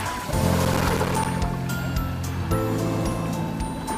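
Processor overload crackle runs from 0.65 to 1.26 s. The processor keeps missing its deadlines for short buffers of around 5 ms, roughly thirty times in quick succession. Each miss leaves a hard-edged gap of silence, and together they form a gritty, tearing crackle over the sound.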